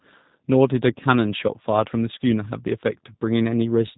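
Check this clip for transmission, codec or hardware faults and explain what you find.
One codec fault runs through the whole clip.

G.729 codec damage is plainly audible from start to finish. The speech is rebuilt from a vocal-tract filter, a pitch predictor and a few pulses per short frame, so it sounds rough and synthetic with nothing above 4 kHz, which fits an 8 kbit/s G.729A stream. The call's microphone high-pass is normal. A plain narrowband telephone line would be muffled in the same way but would not have this buzzy, rebuilt texture.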